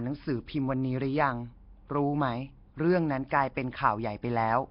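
Speech with heavy damage throughout: a rough, hissy halo, smeared underwater quality, nothing above 5.3 kHz, likely Nellymoser compression at a low bitrate around 22 kbps.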